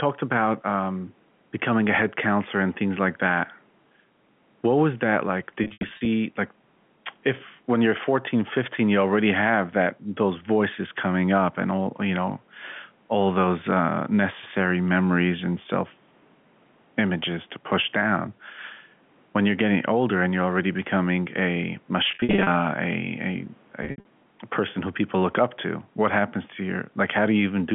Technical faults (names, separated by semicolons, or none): gain pumping; packet loss with pitch repetition